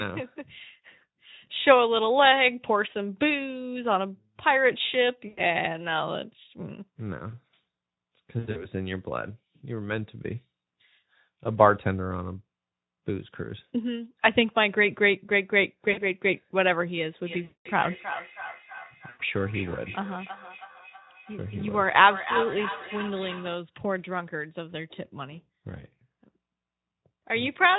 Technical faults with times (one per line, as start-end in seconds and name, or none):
5.27-5.41 VoIP packet loss concealed by the speech codec
8.39-8.69 VoIP packet loss concealed by the speech codec
15.91-16.05 VoIP packet loss concealed by the speech codec
17.21-23.68 feedback echo between two devices
17.43-17.68 VoIP packet loss concealed by the speech codec
19.09-19.21 VoIP packet loss concealed by the speech codec